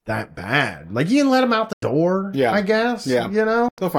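Speech with two abrupt silences, 1.73 to 1.83 s and 3.68 to 3.78 s, about 93 ms each, resuming as if it played on: likely a Bluetooth dropout.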